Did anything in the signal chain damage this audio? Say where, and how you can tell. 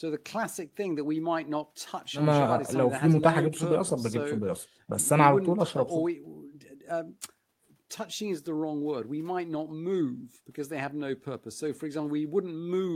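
No, nothing in the chain has audibly damaged this speech recording at any stage. Listening through, there is no point where the signal breaks, shifts or degrades in a way that would trace back to the wiring, conversion, processing, transmission or playback.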